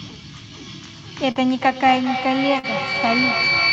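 At 1.31 to 1.38 s there is short concealed packet loss. About 40 ms of audio arrived too late for the decoder, which filled roughly 38 ms by extending the preceding sound before crossfading back, leaving a brief smeared wobble in the speech.

From 1.61 s to the end, a feedback howl builds. A loudspeaker and microphone on the same call form a loop whose gain exceeds unity, so each pass grows louder and narrows toward around 2 kHz. The loop repeats roughly every fifth of a second, and the howl reaches about 3 dB above the speech.

A second short concealed packet loss at 2.59 to 2.66 s sits under the howl. Another 40 ms gap is patched with about 41 ms of synthesised continuation, heard as a short smear.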